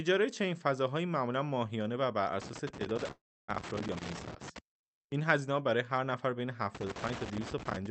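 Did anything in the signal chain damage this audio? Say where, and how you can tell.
Yes. Loose connector crackle appears from 2.42 to 4.59 s and again from 6.75 to 7.86 s, in the analogue wiring. Irregular bursts of scratching chop the sound, the mark of a worn or dirty contact repeatedly making and breaking as it moves.

A call audio freeze runs from 3.11 to 3.50 s, inside the first crackle burst. The sound stalls into a fading tail, then about 280 ms of silence, and resumes where it stopped. The likely cause is network delay draining the jitter buffer, inserting a 369 ms gap with nothing lost.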